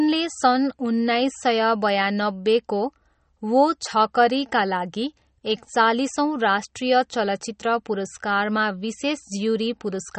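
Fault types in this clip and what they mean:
MP3 compression: throughout, nothing is heard above 8.4 kHz and codec damage is plainly audible, likely MP3 at a low bitrate near 32 kbps. Short of bits, the encoder drops weak frequency lines frame by frame and cuts the treble at a fixed point.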